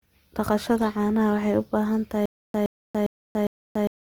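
From the start and through the whole speech clip, Opus compression is plainly audible. The voice takes on a rough, grainy texture instead of sounding clean, as the encoder, likely running in its music (CELT) mode at a rate around 24 kbps, keeps each band's energy but fills starved bands with folded or noise-like content. On a spectrogram there are few holes, only smeared, speckled texture where harmonics should be, with the full bandwidth intact and nothing above 20.2 kHz.

At 2.26 s a stutter with silent gaps begins and lasts to the end. A 118 ms fragment plays and is followed by 286 ms of digital silence, and this cycle repeats four times at an even 404 ms period. This is likely a stalled stream that replays its last buffered piece at each retry and then runs empty, so the audio that belonged there is lost. On the waveform, identical short bursts alternate with flat silent stretches.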